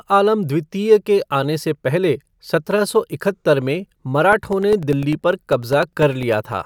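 From 4.33 to 6.53 s, periodic USB or driver dropouts occur. Every 0.1 s a blocked bus silences about a millisecond. Regular ticks result.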